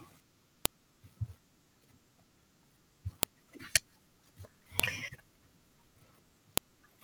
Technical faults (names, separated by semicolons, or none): file header played as audio